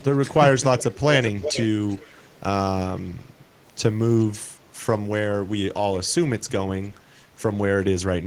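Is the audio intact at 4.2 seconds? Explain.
No. From 4.19 to 4.24 s there is an echo leak: a faint copy of the speech returns 397 ms late, about 30 dB down, likely from a loudspeaker whose echo canceller let residue through. A spectrogram shows a weak ghost of earlier harmonics, and the waveform barely changes.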